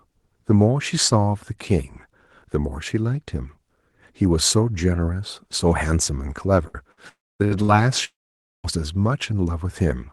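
Short held buzzes and fading hisses break into this speech recording four times, at 6.67, 6.92, 7.45 and 7.63 s. Each is a burst of packet loss: about 60 ms of audio never arrived, and the receiver stretched the last sound it had for roughly 50 to 65 ms, fading it before the speech resumed a little further on with that slice gone. Twice the sound dies out completely. From 7.09 to 7.42 s a brief buzz or hiss gives way to about 240 ms of silence, and from 8.04 to 8.67 s about 520 ms of silence follows. These are likely long network dropouts, with about 300 ms and 600 ms of speech lost. In each case the receiver's filler fades within about 60 to 75 ms, leaving the gap empty until audio returns. The coding noise and the top end ending near 12 kHz fit an Opus call path at around 24 kbps.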